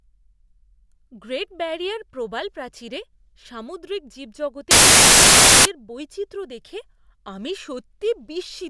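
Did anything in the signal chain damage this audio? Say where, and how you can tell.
Yes. The damage happened at storage or file parsing: the file tags were played as audio. From 4.71 to 5.65 s the speech gives way to very loud white noise with hard edges. That noise comes from compressed cover-picture data being decoded as if it were samples.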